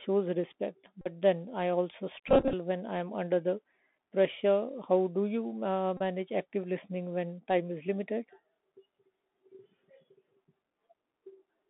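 Throughout, the headset link runs the narrowband Bluetooth CVSD codec, whose one-bit delta coding (a 64 kbps stream) cannot keep pace with fast high-level detail. The speech is confined to roughly 200 Hz to 3.6 kHz, with scratchy sibilants, audible granular hiss, and distortion on loud bright sounds.

From 1.01 to 1.08 s, from 2.28 to 2.54 s, and from 5.97 to 6.01 s, voice packets were lost and the decoder replayed the previous packet's bits. This is the Bluetooth headset packet repeated fault. The first gap covers about 41 ms and the last about 30 ms, each a short buzz near 267 Hz. In the middle stretch, 150 ms of losses are scattered over about a quarter second, with runs up to about 20 ms, giving a broken, stuttering buzz.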